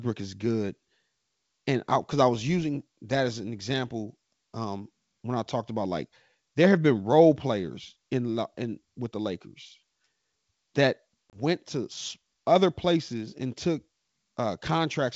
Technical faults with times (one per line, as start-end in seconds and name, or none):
11.30-11.37 packet loss on an ADPCM call